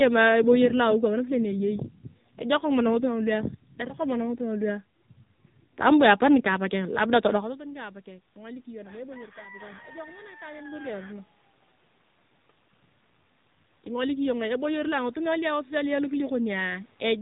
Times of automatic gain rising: 6.51-11.33, 13.84-17.17

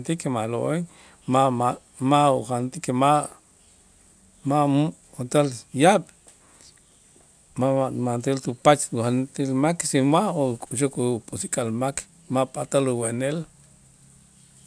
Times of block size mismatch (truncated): none

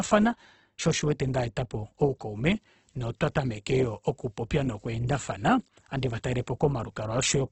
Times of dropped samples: none

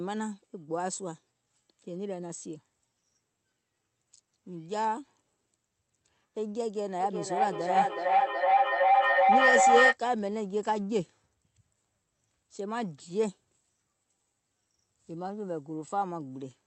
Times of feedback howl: 7.00-9.98

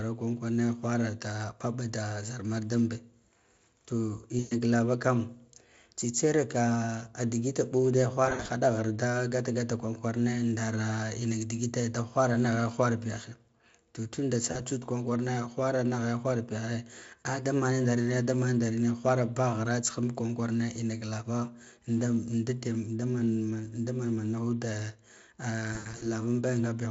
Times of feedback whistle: none

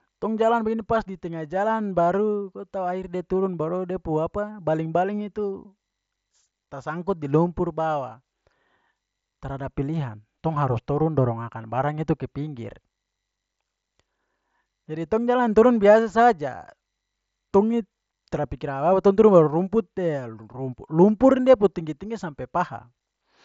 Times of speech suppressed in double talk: none

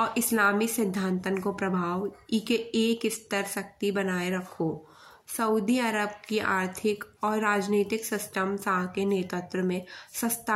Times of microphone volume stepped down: none

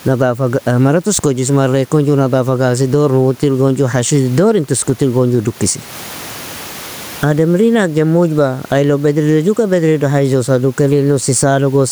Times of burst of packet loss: none

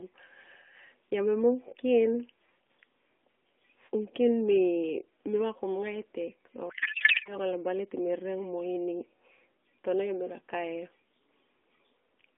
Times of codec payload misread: 6.70-7.35

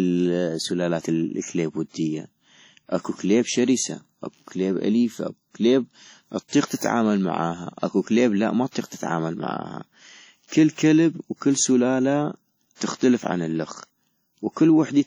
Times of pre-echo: 12.75-12.81

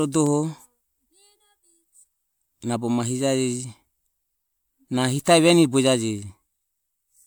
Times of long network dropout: none

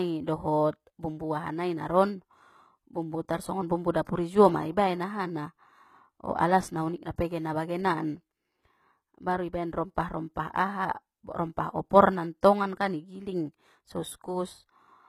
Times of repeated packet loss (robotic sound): none

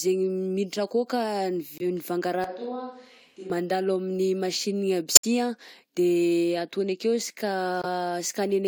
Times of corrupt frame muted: 1.78-1.82, 5.15-5.25, 7.82-7.85

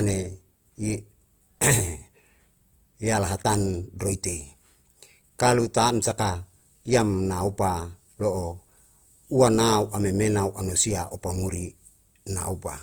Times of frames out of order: none

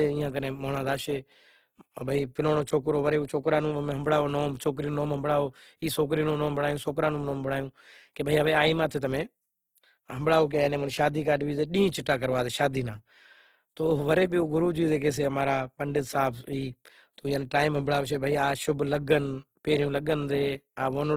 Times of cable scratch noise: none

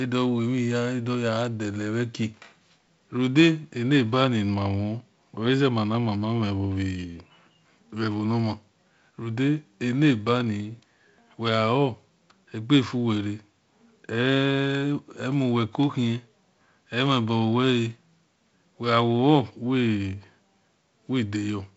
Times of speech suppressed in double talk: none

